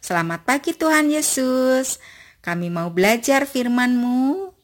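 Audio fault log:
Throughout: crude rate conversion. The audio was resampled by simply picking the nearest existing sample, with no interpolation filter, in a way that fits a change from 48 kHz to 44.1 kHz. The resulting timing errors repeat in a fixed cycle set by that ratio, creating shifted, inharmonic copies of the speech. They sit only about 20 dB below the speech and are heard as a gritty, inharmonic fizz riding on louder and brighter syllables.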